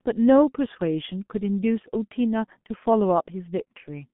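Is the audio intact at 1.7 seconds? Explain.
No. At 1.7 seconds, as throughout, the speech carries heavy G.723.1 codec damage. Nothing reaches above about 3.8 kHz, and the coarse 30 ms frames, consistent with a 6.3 kbit/s rate, update the voice model slowly, leaving the sound muffled and hoarse with smeared consonants.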